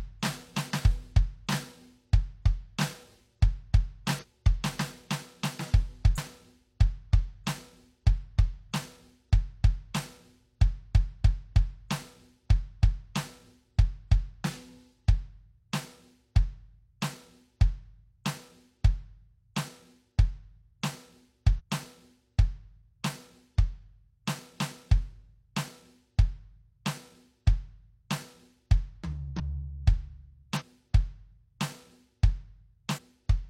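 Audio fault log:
4.18–4.25, 6.13–6.18, 11.20–11.23, 21.55–21.62, 29.35–29.41, 30.56–30.63 and 32.93–33.00 s, compressed frames skipped: the music lurches forward. Each time a block of compressed frames goes unplayed and the decoder picks up later in the piece. Most skips lose around a fifth of a second, the one near 11.2 s closer to three quarters. That fits whole frames of about 46 ms going missing.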